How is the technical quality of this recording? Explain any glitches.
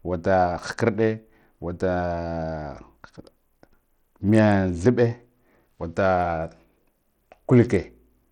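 The recording is noticeably degraded by codec damage, audible across the whole speech clip. The likely cause is Bluetooth SBC compression, at a rate that fits about 80 kbps. With so few bits, the codec's fixed sub-bands give the upper ones almost nothing, so the treble thins and flickers while a gritty, aliased noise rides on the speech. Unlike a clean low-pass cut, the top end comes and goes rather than stopping at one fixed frequency.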